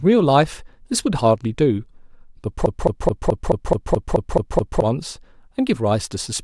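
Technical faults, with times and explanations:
2.66 to 4.82 s, broken-record loop: a 0.21 s fragment of speech repeats exactly ten times, likely a stalled stream resending its last buffer while the real audio is lost.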